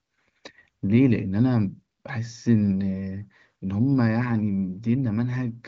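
The speech carries the band-limited character of AMR wideband (HD Voice) coding, with content stopping at about 7.3 kHz and only faint traces of the codec's processing, which fits its high 23.05 kbit/s rate.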